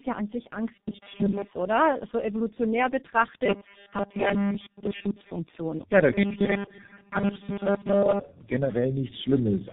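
Throughout this speech clip the sound is rough, muffled and warbly, with nothing above 3.7 kHz, the mark of tandem speech coding: the audio was decoded and re-encoded by two speech codecs in a row, the second most likely G.723.1, each degrading the last one's output. From 0.74 to 1.51 s, right after "ja an sich", the speech turns into a rigid, metallic 200 Hz buzz, a robotic sound likely caused by repeated short buffers of about 5 ms replacing most of the real audio.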